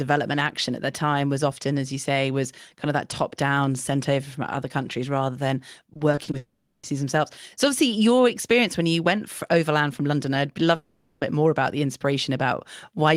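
From 5.93 to 6.35 s the speech turns choppy and robotic: repeated packet loss, six brief gaps of about 20 ms each patched by repeating the preceding sound.

Immediately after, 6.37 to 6.85 s, and again 10.75 to 11.23 s, the audio becomes a fading smeared buzz, likely a long network dropout, with about 460 ms missing each time.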